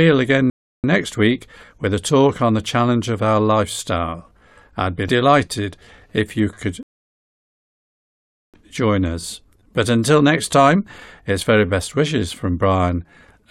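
Speech that drops into silence twice and then carries on exactly where it left off: briefly from 0.50 to 0.84 s, and for longer from 6.83 to 8.54 s. These are rebuffering stalls, where the player ran out of downloaded audio and waited, adding about 0.34 s and 1.71 s without losing anything.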